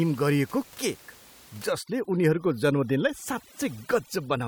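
A speech recording where, from about 1.72 s to the end at 4.47 s, overdone noise removal sets in: a noise reducer working far too aggressively cuts individual frequency bands down or out whenever they come close to its noise estimate, taking the quieter parts of the voice along with them. The room noise, audible before this at about 24 dB below the speech, drops and breaks up into twinkling specks.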